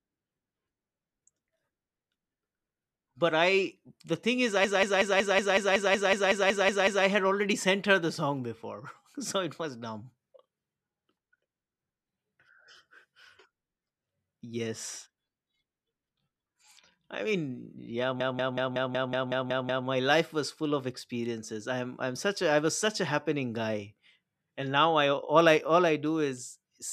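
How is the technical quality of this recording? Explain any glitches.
The recording is marred by two stutters. From 4.64 to 7.06 s, after "the thing is i", a 186 ms fragment repeats 13 times at about 5.4 Hz, a machine-gun stutter before "had already sent her". The same happens from 18.20 to 19.88 s, nine repeats between "i mean yeah" and "life was full of". This is a system hang loop: the system froze while the audio hardware kept replaying one buffer, which fits an 8192-sample buffer. Little or no audio is lost.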